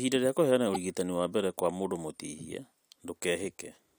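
From 0.72 to 0.76 s, a short glitch marks damaged data in the compressed stream. Misread frames garble decoding until sync returns.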